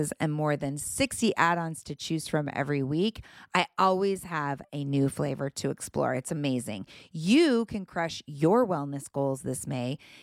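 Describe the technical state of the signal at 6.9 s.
At 6.9 s the speech signal is intact, with no audible fault at that point.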